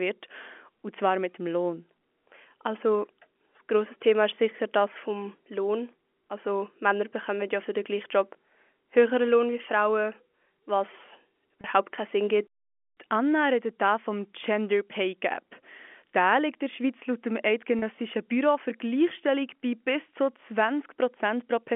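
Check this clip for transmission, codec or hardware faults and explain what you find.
Two brief dropouts of packet loss with pitch repetition occur on a G.711 telephone path, whose 250 Hz to 3.4 kHz line band comes through intact.

At 11.61 s, and at 17.79 s just after "laut dem", about 30 ms of audio was lost each time, which fits a single missing packet. The receiver bridged each gap by replaying the last pitch period, so the voice briefly holds on a slightly buzzy, sustained tone before normal speech resumes.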